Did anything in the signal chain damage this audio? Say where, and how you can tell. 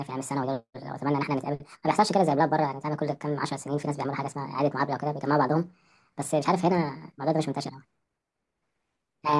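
Yes. From start to finish the speech sounds high and hurried, sped up by a factor of 1.5 with pitch raised about 7.02 semitones, so voices take on a chipmunk brightness while every syllable arrives too quickly. This is a wrong sample rate fault at the playback stage. Samples are clocked out faster than they were captured, with no conversion, so speed and pitch rise together by the same ratio, which fits 16 kHz material played at 24 kHz.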